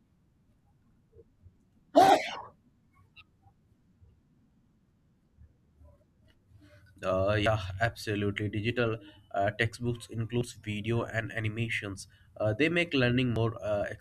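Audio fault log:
1.56, 4.51, 7.46, 10.41 and 13.36 s: audio missing between chunks. Short skips of around 50 ms, spaced about every 3 s, likely from pieces lost at chunk boundaries.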